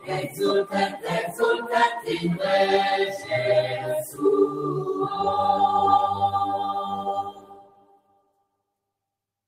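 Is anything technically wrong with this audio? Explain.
Yes. Sound cut by the noise suppressor appears from 7.23 to 8.44 s of this music, affecting roughly a second of it. The suppressor mistook part of the musical material for background noise and pulled it down harder than everything around it, with the deepest cut reaching about 14 dB. What's heard is a sag in level across that stretch, as if the music is briefly ducked.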